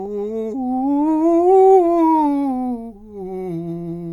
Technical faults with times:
none

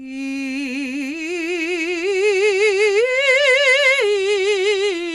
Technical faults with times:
0.00-5.14 MP2 compression

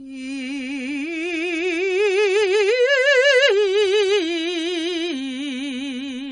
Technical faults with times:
0.00-6.31 AAC compression

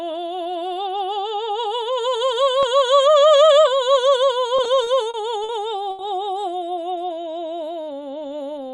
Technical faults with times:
4.57-5.52 repeated stalls (stutter)
5.91-6.02 short stall from a late packet

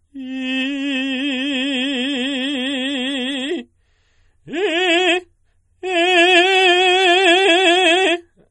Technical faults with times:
0.00-8.50 MP3 compression

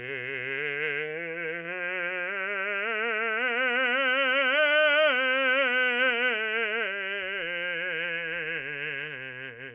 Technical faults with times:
none

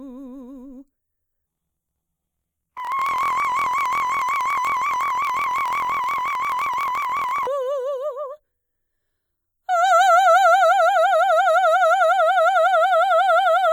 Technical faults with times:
1.47-7.47 planar audio read as interleaved

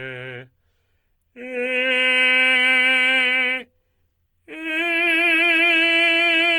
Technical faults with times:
0.00-6.58 Opus compression

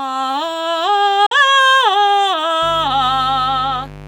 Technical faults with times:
1.26-1.32 Bluetooth dropout
2.62-4.07 mains buzz

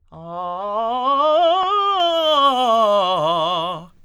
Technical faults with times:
0.00-2.00 de-emphasis applied wrongly

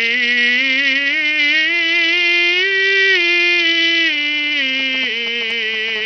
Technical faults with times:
0.00-6.06 Bluetooth SBC compression
4.79-5.90 GSM signalling bursts
5.96-6.01 GSM phone buzz

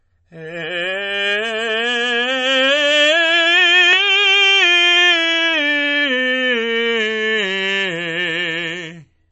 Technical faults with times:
0.00-9.31 MP3 compression

